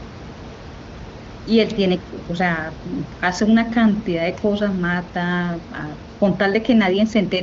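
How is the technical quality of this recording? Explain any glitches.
No glitches are audible anywhere.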